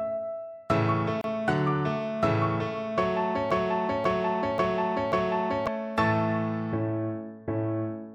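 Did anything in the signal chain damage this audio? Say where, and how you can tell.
Yes. At the codec stage there is a gap at a join of encoded pieces, a silence of about 29 ms from 1.21 to 1.24 s. Each piece's encoder delay and padding were left in, so the spectrogram shows a thin blank vertical stripe with smeared edges.

From 3.51 to 5.67 s there is a broken-record loop. A 0.54 s fragment repeats exactly four times, back to back, and the sound that belonged there is lost. The waveform shows identical blocks, and the spectrogram shows a repeating tile. The likely cause is a stalled playback or stream buffer.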